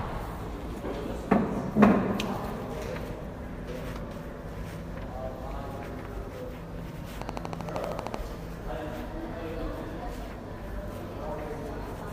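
From 7.22 to 8.15 s there's a train of clicks, about fifteen evenly spaced ticks at 12.9 per second, poking well above the sound. They're all the same shape, which points to a likely cause of interference from nearby gear or a faulty connection or power supply.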